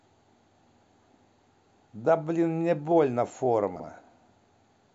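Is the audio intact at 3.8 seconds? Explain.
No, there are chunks out of order from 3.76 to 3.84 s. One 40 ms chunk lands a slot late, so the speech briefly jumbles.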